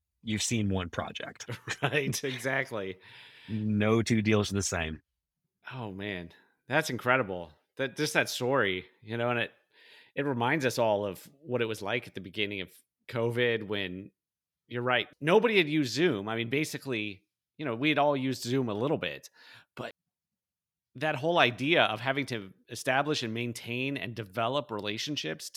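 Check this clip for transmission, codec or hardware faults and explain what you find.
One fault: a CD skip at 19.91 s in the speech. A knock or disc flaw made the laser jump to another turn of the spiral. The player muted for only a few milliseconds, heard as a tick, then resumed from a displaced point in the audio.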